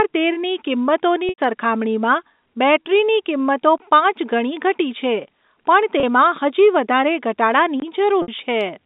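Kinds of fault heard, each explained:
Packet loss with pitch repetition: Packets of the speech stream failed to arrive, and the receiver filled each hole by looping the last pitch period while fading it down. The 30 ms loss at 6.0 s, just before "હજી વધારે", is brief enough to sound like a faintly held, buzzy sound. The 60 ms loss at 8.22 s and the 90 ms loss at 1.29 s, right before "સરખામણીમાં બૅટરીની કિંમતો પાંચ", stretch long enough to sag toward silence before speech resumes.
Gap between chunks: The audio was delivered in blocks of about 4 s, with roughly 21 ms of silence left at each join. Nothing is missing, but the flow is cut: once at 3.78 s, between "સરખામણીમાં બૅટરીની કિંમતો" and "પાંચ ગણી", and again at 7.80 s. The spacing of these two holes matches the block length, which points to chunked transfer or playback as the cause.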